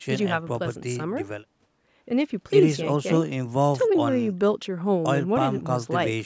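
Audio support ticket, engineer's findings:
No faults found: speech passes through normal call microphone processing, with the expected high-pass trimming of the lowest bass and no content above 8 kHz, which fits a wideband call path.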